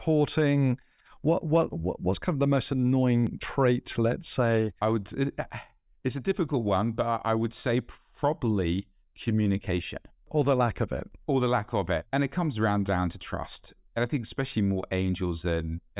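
No technical faults can be heard anywhere in the speech recording, and the signal stays steady and intact throughout.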